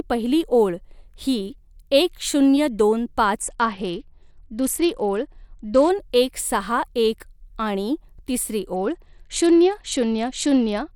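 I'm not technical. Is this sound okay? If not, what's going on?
No, it isn't. From 3.41 to 5.90 s, just before "एक सहा एक", and again from 8.74 s to the end, the speech goes dull and gritty. That's a Bluetooth SBC bit pool drop: the wireless link got crowded, so the phone squeezed the sound harder, losing treble and adding grain.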